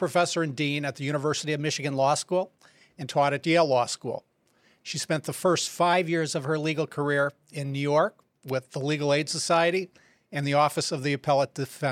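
From 1.41 to 3.02 s, after "and dean at the", and from 5.93 to 6.92 s, after "spent the first", the speech jumps 5.8% faster and about a semitone (97.6 cents) sharp, then returns. This is likely a drift correction step that abruptly changed the playback rate.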